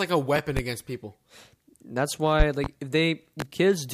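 Loud pops come as a double pop at 0.36 to 0.61 s, another pair at 2.40 to 2.68 s and a single pop at 3.40 to 3.44 s, each roughly 15 dB above the speech. They are likely voltage pulses from a switch, plug or static. Unlike a dropout, the speech continues underneath.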